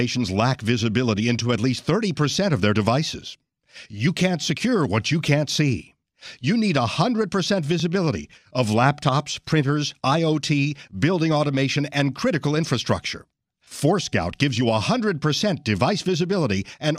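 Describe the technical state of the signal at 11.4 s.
At 11.4 s the speech signal is intact, with no audible fault at that moment.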